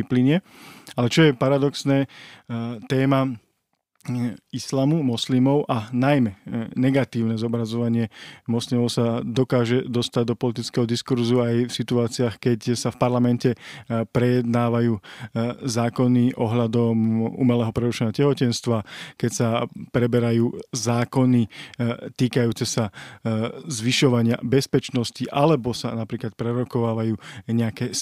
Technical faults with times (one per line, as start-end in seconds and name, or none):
none